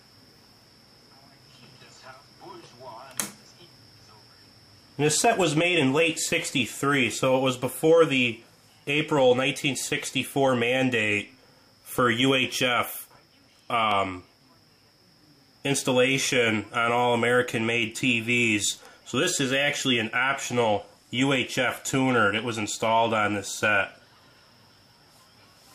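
A single sharp click breaks through at 13.91 s, and another at 22.39 s, each showing as a thin vertical line across the spectrum. These are most likely dropped samples: a tiny run of samples, well under a millisecond's worth, went missing from the stream, so the waveform leaps straight from one value to a later one. The gap is far too brief to remove any audible sound; only the abrupt jump is heard.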